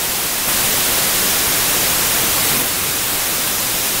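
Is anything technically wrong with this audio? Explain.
Yes. A wrong sample width runs through the whole clip. Data written as 32-bit integers are read as packed 24-bit ones. Most samples mix bytes from neighbouring values. Loud noise covers the speech, which plays at 0.75 speed and lower pitch.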